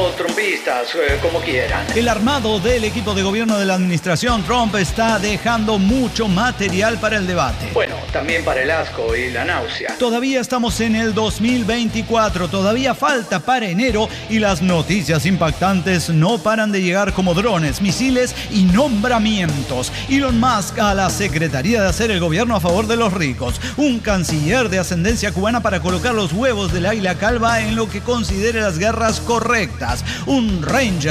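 A sharp tick at 7.86 s marks a block of digital silence, about 12 ms of zeros, which fits a 512-sample buffer that wasn't filled in time.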